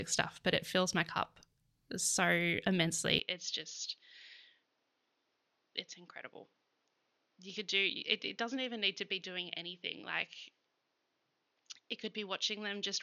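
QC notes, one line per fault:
3.19 s to end, input likely switched to a poorer device. The speech turns dull and narrow with no gap. Nothing remains above 6.8 kHz. The level drops by about 10 dB. A faint new noise floor appears, well below the speech.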